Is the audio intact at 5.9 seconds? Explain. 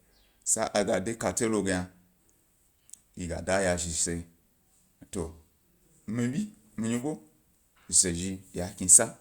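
Yes, at 5.9 seconds the speech plays through intact, with no dropout, click, distortion or other fault at that point.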